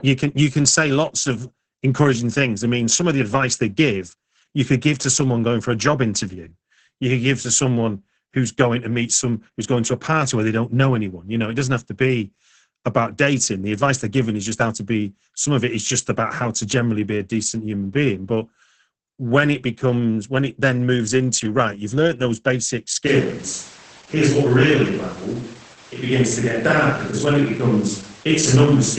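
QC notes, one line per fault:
Throughout, Opus voice compression: the speech is coded with the SILK linear-prediction coder at a rate low enough to sound like about 10 kbps. Nothing above 9.1 kHz survives, so sibilants and breath lose their air. The excitation is coded coarsely in short frames, leaving the speech muffled, hoarse and faintly robotic. The damage is heavy and stays constant across the whole clip.
23.07 s to end, switch to a distant microphone: right after "you've learned those basic", the sound turns roomy and hollow and stays that way. Bass thins while the level hardly changes. Room noise rises to roughly 25 dB below the speech. The abrupt change in character likely means the close microphone dropped out and a farther one, such as a camera microphone, took over.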